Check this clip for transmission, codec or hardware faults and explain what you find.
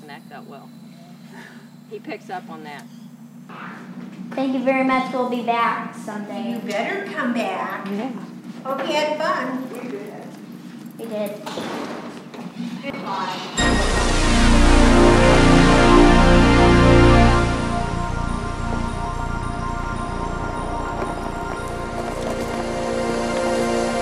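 Nothing stood out on listening that would point to a problem in how this clip was transmitted, encoded or captured.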